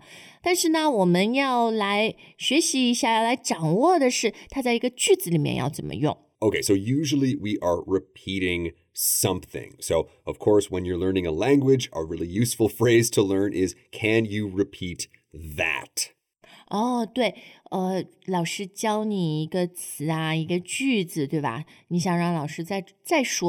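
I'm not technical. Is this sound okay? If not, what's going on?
No. The whole clip has channel delay (comb filtering). One channel arrives a fraction of a millisecond late. When both are mixed together, they cancel at evenly spaced pitches, starting around 1.5 kHz. That gives the speech a hollow, phasey sound.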